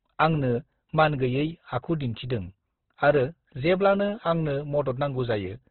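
This speech clip was likely squeezed through Opus compression at a very low rate in its music (CELT) mode, consistent with roughly 12 kbps, narrowing the band so nothing survives above 4.2 kHz. Throughout, the speech sounds dull, rough and grainy, with heavy codec damage.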